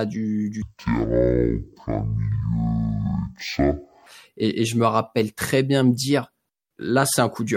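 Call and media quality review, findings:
Stereo read as mono, 0.62 to 4.07 s: interleaved left/right samples decoded as one channel, so speech plays at 0.5x speed, an octave (12 semitones) low.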